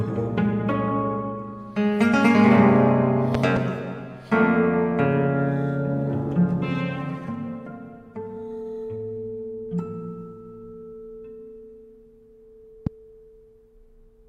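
Three loud pops sit on top of the audio: a double pop between 3.35 and 3.59 s, and a single one at 12.87 to 12.89 s, each peaking about 15 dB above the surrounding level. The likely cause is a brief voltage pulse from a plug, switch or static discharge entering the signal chain. Unlike a dropout or an edit click, the sound continues uninterrupted underneath each thump rather than breaking off.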